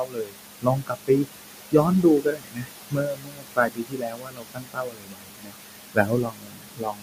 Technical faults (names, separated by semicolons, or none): noise suppressor artifacts; speech cut by the noise suppressor